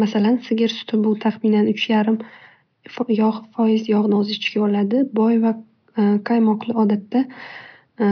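No technical faults can be heard anywhere in the recording. A faint room noise sits about 52 dB below the speech, and it belongs to the space where the microphone was rather than to the system.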